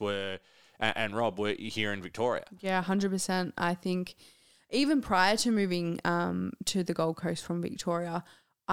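Nothing in the speech here needs flagging; there's no technical fault to point to anywhere in the recording.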